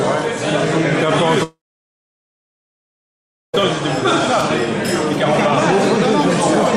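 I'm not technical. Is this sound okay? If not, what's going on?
No. At 1.43 s the sound fades into a brief buzz, then silence until 3.55 s. This is likely a long network dropout, losing about two seconds.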